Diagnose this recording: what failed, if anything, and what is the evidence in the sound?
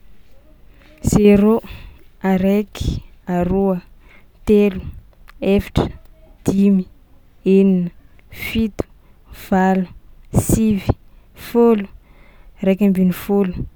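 Nothing failed: no stage of the chain leaves an audible fault anywhere in this speech recording.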